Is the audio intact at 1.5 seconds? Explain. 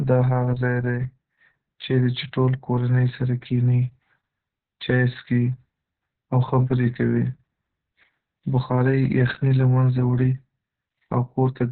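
No. Opus voice compression covers 1.5 s and the whole clip. A very low-bitrate narrowband speech coder cuts everything above 4.4 kHz and coarsely codes the excitation, leaving speech muffled, hoarse and slightly robotic.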